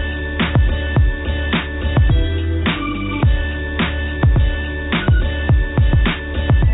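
No technical fault can be heard anywhere in the audio. It has passed through a WebRTC call path whose narrowband coding, consistent with G.711 mu-law, leaves nothing above 4 kHz, so the top end sounds like a telephone line.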